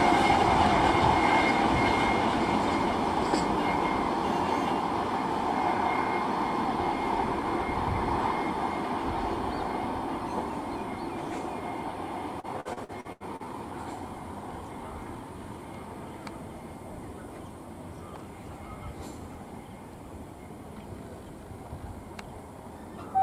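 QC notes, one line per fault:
12.40–13.46 s, repeated packet loss (robotic sound): the sound turns choppy for about a second, with what sounds like seven short holes, the longest near 79 ms. Each hole is bridged by stretching out the sound just before it, so roughly 30% of this stretch is filled-in material rather than real signal. Because the holes come in quick succession, the patches run together into a robotic, clipped texture.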